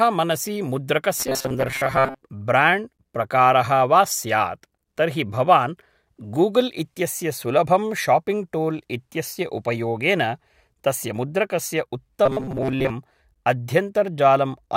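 From 1.17 to 2.21 s, and again from 12.26 to 12.92 s, the speech turns into a rigid metallic buzz near 133 Hz: robotic sound from repeated short buffers. A roughly 7.5 ms chunk is likely being replayed, replacing most of the audio in the first stretch and about half in the second.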